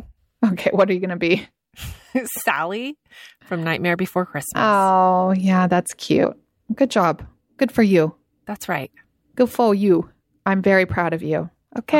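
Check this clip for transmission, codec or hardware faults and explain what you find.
One codec fault appears, at 6.23 s: compressed frames skipped. About three whole frames were lost, likely missing from the file or rejected by the decoder as damaged, so the speech jumps ahead roughly 70 ms, consistent with frames of about 26 ms. Because neighbouring frames overlap, the join is a brief smeared blip rather than a hard click, and no silent gap is left as a dropout would.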